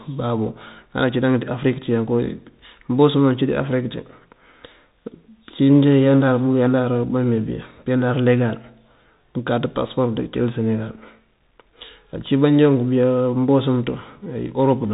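The speech has passed through a Bluetooth CVSD headset codec for its whole length, which fits a 64 kbps one-bit delta stream. Its adaptive step lags loud, fast changes, so sibilants turn scratchy and distorted, nothing above 4 kHz survives, and granular hiss sits underneath.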